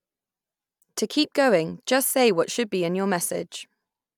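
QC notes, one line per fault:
No faults found in this speech recording.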